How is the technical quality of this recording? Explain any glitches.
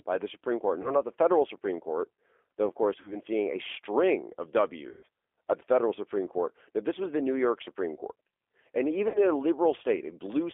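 Quality is what you'd expect from a low-bitrate phone call, with two problems.

Throughout there's G.729 codec damage. The sound sits in a 300 Hz to 3.5 kHz band, and it's rebuilt from a vocal-tract filter plus a few pulses per frame at 8 kbit/s, so it comes across plainly rough and a bit synthetic.

Then there's VoIP packet loss concealed by the speech codec, in four spots: 0.82 to 0.91 s (right before "not the federal"), 3.01 to 3.17 s, 4.89 to 5.05 s (between "seeing a string of" and "at the federal"), and 9.08 to 9.23 s (just before "in a"). Each time, the decoder fills the gap by stretching its last pitch and filter into a buzzy tone or coloured noise that fades. The gaps are about 20, 40, 140 and 60 ms. The sound stays weak for a moment after each one, because every frame builds on the one before it.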